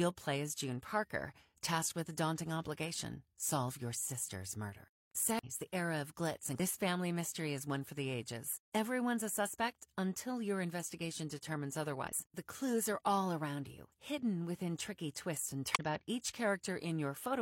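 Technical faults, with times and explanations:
5.39–5.50 s, 6.55–6.60 s, 12.08–12.14 s and 15.75–15.80 s: damaged data in a compressed stream. Corrupted bytes in the encoded speech make the decoder misread frames, lose sync and hunt for the next valid frame header, so each spot becomes a short chirp, squawk, click or gap rather than clean speech. The first falls right after "solve your sister's murder", the second between "the era of glitz" and "family mystery is one", the third just after "until your investigation determines".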